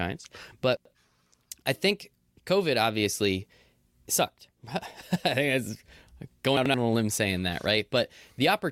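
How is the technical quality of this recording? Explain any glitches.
The recording has two brief garbled moments in the speech, at 0.77 to 0.94 s and at 6.57 to 6.74 s, just before "on a limb saying". Each sounds like a jumbled moment. These are chunks out of order: a block of about 85 ms arrived one chunk late and played after its successor. Nothing is missing, but the swapped order leaves three hard joins.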